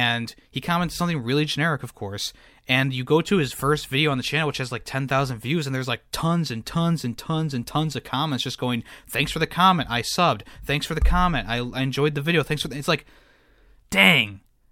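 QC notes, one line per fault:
No faults found in this speech recording. Nothing in the audio calls for a QC note.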